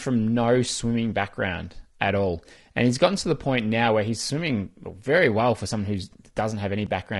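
From start to finish the speech has a rough, grainy texture, with hiss filling the gaps between the harmonics of the voice and a top end that sounds dulled. That's likely low-delay AAC compression, the AAC-ELD style used in video calls. Its short frames can't resolve pitch harmonics very finely, and the damage here is plainly audible, which fits a bitrate somewhere around 32 kbps.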